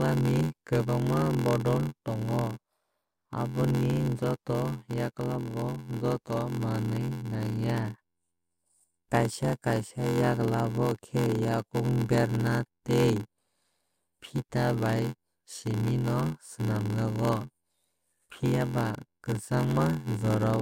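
From start to finish the speech carries a steady buzz at about 86 Hz and plays back slower than normal, at 0.861 times its natural rate, while its pitch stays roughly where it should be. This is a padded block size mismatch. One stage delivers blocks shorter than the next stage reads, which fits a 512-sample read, and the shortfall in each block is filled with silence. Those tiny gaps repeat at the block rate to form the buzz and stretch the timing.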